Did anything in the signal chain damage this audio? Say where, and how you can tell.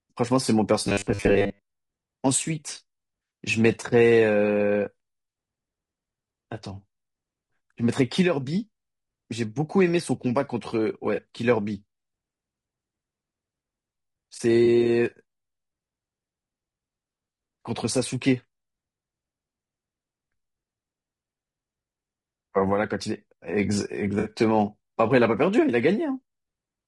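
Yes. Low-delay AAC compression at the codec stage shapes the whole speech clip. Harmonics sound rough and grainy, with noise filling the gaps between them and a thin, somewhat synthetic top band. The cause is likely AAC-ELD, whose short frames resolve pitch structure poorly, and the plainly audible damage fits a bitrate around 32 kbps. There are too few bits to code each short frame cleanly.

Robotic sound from repeated short buffers appears from 0.87 to 1.68 s, at the driver or buffer stage. The voice becomes a rigid, metallic buzz at 100 Hz that still loosely tracks the speech. A steady 100 Hz tone fits a 10 ms chunk being replayed again and again. The likely cause is audio arriving too seldom, so playback fills the gap with repeats and skips most of the real signal.

AAC frame loss with concealment occurs at three points: 11.15 to 11.19 s, 14.65 to 14.68 s, and 24.19 to 24.3 s. The first two are brief smeared, phasey patches, each with about 20 ms of audio lost, which fits one missing frame. 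The third loses about 60 ms, which fits three consecutive frames. Frames were lost in the network path, and the decoder rebuilt each gap from the last good spectrum.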